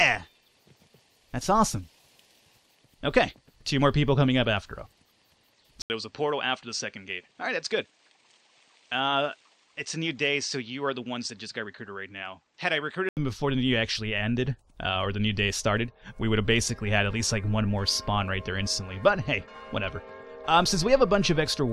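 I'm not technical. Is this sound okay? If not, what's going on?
No. From 5.82 to 13.17 seconds, after a brief gap, the sound turns duller and slightly quieter, likely an input switched to a poorer device mid-recording.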